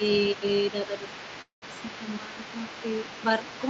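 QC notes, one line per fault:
throughout: overdone noise removal. The background has been pulled down, with twinkling specks where isolated frequency bands flicker on and off around the suppressor's noise estimate. Quieter parts of the speech fall under that threshold and are removed with the noise. The 8 kHz top end of the Opus call path is normal and not part of this fault.
0.00–3.70 s: other side's voice leaking through. A second voice sits under the main talker for the whole clip, at roughly 20 dB below the speech. The likely cause is loudspeaker playback of the far end being picked up by the microphone and only partly removed by the echo canceller.
0.87–1.04 s and 2.20–2.35 s: speech suppressed in double talk. In both spans the talker's level sags by about 5 dB, for roughly 100 ms in the first span and 150 ms in the second. The likely cause is the echo canceller failing to separate the near voice from the leaking far-end voice while both were active, and attenuating everything. 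The dips sound like brief ducking rather than full dropouts.
1.41–1.76 s: call audio freeze. The audio stalls for 206 ms. A short fading continuation of the last sound runs into about 140 ms of silence, and playback then resumes exactly where it stopped, with nothing lost. This is likely a jitter-buffer underrun caused by delayed packets. The result is a gap inserted into the speech, which pushes everything after it 206 ms later.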